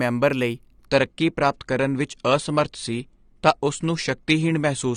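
At 0.86 s the adaptive stream drops to a lower bitrate and stays there to the end, the speech abruptly losing everything above 9.7 kHz, with a duller treble. That fits a switch from roughly 96 to 32 kbit/s AAC, with no gap.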